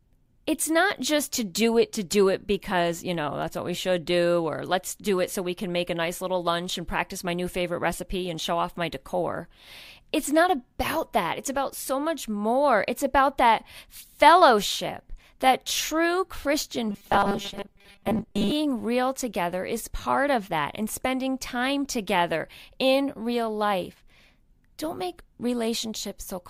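Robotic sound from repeated short buffers runs from 16.9 to 18.5 s, ending just before "real together is part". The speech becomes a rigid metallic buzz near 200 Hz. Audio likely arrived too seldom, so about 5 ms snippets were looped over most of the stretch.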